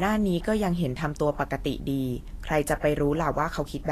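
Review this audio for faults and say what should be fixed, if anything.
The speech carries plainly audible Vorbis compression damage from start to finish. Nothing is present above 14.2 kHz. The treble sounds hissy and grainy. Consonant attacks are smeared, and voiced tones have a rough edge. This fits the likely cause, a low-quality Vorbis encode near 36 kbps. At that rate the encoder keeps only a coarse outline of the upper spectrum. It fills in fine detail with noise of similar energy. To prevent it, encode at a higher quality setting or keep a lossless master.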